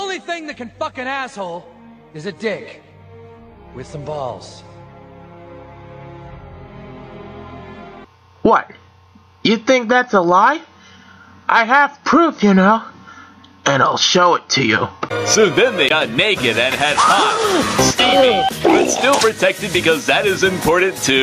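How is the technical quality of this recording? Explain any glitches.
The recording suffers from gain pumping throughout. The level keeps lurching, with a gain swing of around 10 dB. The likely cause is input gain set far too high, with a fast limiter clamping down on every peak. Loud and soft passages end up squashed toward one level.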